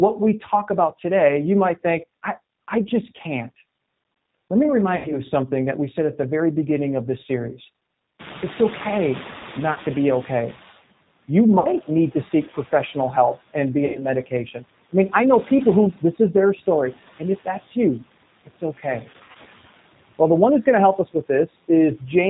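Throughout the recording the G.729 codec (the G.729A variant at 8 kbit/s) leaves plainly audible damage. The speech is rebuilt from a vocal tract filter and pitch predictor with only a few pulses per frame, so it sounds rough and slightly synthetic, and nothing above 4 kHz survives. The graininess sits evenly under every syllable rather than pumping with pauses.

Noise suppressor artifacts run through the whole clip as well, with the background pulled down by about 17 dB. Between phrases the residue sinks away and rises again under the voice. The codec's roughness is steady, but this effect follows the gaps between words.

At 4.96 to 5.16 s there is VoIP packet loss concealed by the speech codec. About 90 ms of audio is missing, which fits three lost packets. The decoder stretches its last pitch and filter into a buzzy tone or coloured noise that fades, and the voice stays weak briefly after the gap. 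The same sound returns at 9.73 to 9.78 s (30 ms), at 11.59 to 11.70 s (60 ms), and at 13.86 to 14.06 s (90 ms) just after "professional help and be". At 19.11 to 19.37 s, 150 ms is lost in scattered runs over 240 ms, the longest 60 ms. A lost packet leaves this tonal smear, while suppression only leaves a dip in level.

Around 8 s the room noise jumps by about 23 dB, and from 8.19 to 10.83 s, after "beginning of this series", the noise suppressor is catching up. The noise first comes through with little reduction, then sinks over about 2.6 s to roughly 13 dB down. This shows up as a slow fade of the background.

Speech cut by the noise suppressor occurs at 14.26 to 14.63 s, just before "I mean I know", with a drop of about 11 dB over roughly a tenth of a second. It happens again at 18.46 to 18.85 s (about 12 dB, around 150 ms in total) and at 21.47 to 21.69 s (about 8 dB, about a tenth of a second). 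Soft sounds are swallowed and turn faint, with no buzz or smear, so these are quieter dropouts rather than concealed packet losses.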